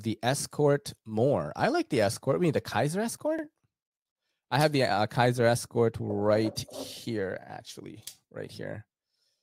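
At about 3.39 s there's a quick stutter where a sliver of the speech plays twice, running to roughly 3.43 s. That's overlapping chunks: the audio was handled in blocks of about 4.0 s, and the next block started before the previous one had finished, so the join repeats about 44 ms of material. It comes across as a small hiccup or tick in the speech, as if the line skipped back for an instant.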